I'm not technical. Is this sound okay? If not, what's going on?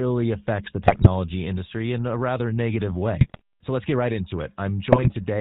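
No. The speech went through the GSM full-rate codec, an old mobile-phone compression scheme that cuts off the higher frequencies, so the voice sounds buzzy and gravelly throughout.

There are also GSM bit errors: damaged data reached the decoder, causing brief squawks and gargling from 0.88 to 1.07 s (between "affects the" and "industry in a rather"), 3.21 to 3.41 s (after "in a rather negative") and 4.92 to 5.12 s.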